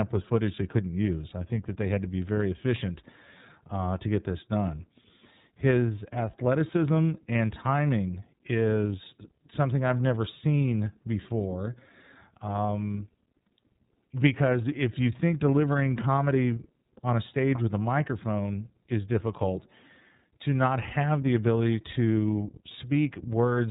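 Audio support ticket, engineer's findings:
iLBC codec, throughout. Band-limited to 4 kHz; speech clear but rough, slightly synthetic from per-frame excitation coding. Codec damage plainly audible. Frame timing and texture fit iLBC's 30 ms, 13.33 kbps mode.

Lost iLBC frames, 1.29–1.32 s, after "with footage they couldn't", before "I think that they". One 30 ms frame missing; decoder repeats last pitch cycle with noise, heard as brief, slightly buzzy or breathy held vowel. Speech recovers immediately, since iLBC frames decode independently.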